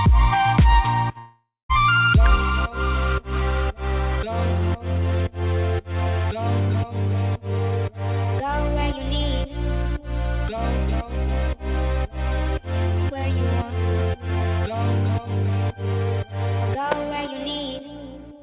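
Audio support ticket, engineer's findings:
Long network dropout, 1.18–1.71 s: sound smears into a fading buzz, then about 0.2 s near-silence; resumes later, roughly half a second lost. Likely packet stall. Unlike a mute, the lost part is never replayed; audio picks up further on.

Electrical switching spike, 2.26 s: sharp snap laid over the sound, no gap or smearing around it. Likely nearby switch, relay or static arc coupling into the audio line. Differs from packet-loss clicks: the signal underneath continues intact.

Electrical switching spike, 16.92 s: same sharp snap, same isolated character, about 10 ms. Same likely cause. Call path shows nothing above 4 kHz, consistent with G.711 A-law at 64 kbps.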